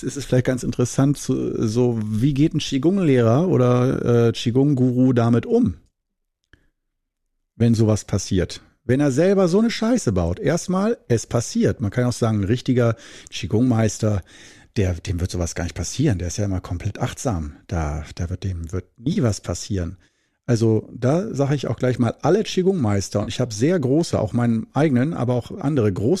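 Speech with three short dropouts that sound like AAC frame loss with concealment: the decoder papers over missing audio with a brief smeared, noisy patch at 2.69 s, 19.13 to 19.18 s and 23.23 to 23.30 s. Those gaps run 10, 30 and 40 ms, which fits whole 10 ms frames of the low-delay AAC the clip is likely carried on.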